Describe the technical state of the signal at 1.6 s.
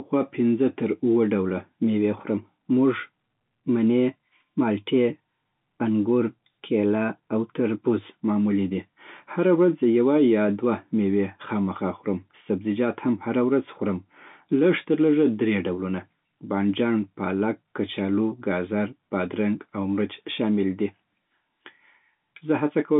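At 1.6 s the audio is intact, with the speech carried cleanly through G.711 telephone coding in a line band of roughly 150 Hz to 3.7 kHz and nothing above 3.8 kHz.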